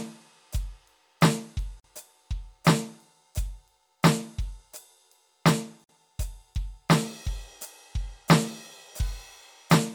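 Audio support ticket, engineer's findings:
Dropouts in continuous music at 1.80–1.84 s (about 44 ms) and 5.84–5.89 s (about 49 ms), spaced 4.0 s apart, with smeared edges. The music resumes where it stopped. Gap at a join of encoded pieces: 4 s segments were encoded separately and concatenated untrimmed, so encoder delay and last-frame padding remain as silence.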